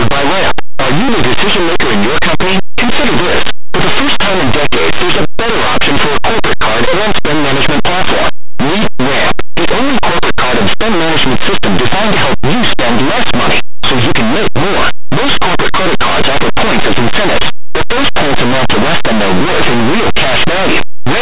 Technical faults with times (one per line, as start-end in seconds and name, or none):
0.00-21.21 linear audio read as companded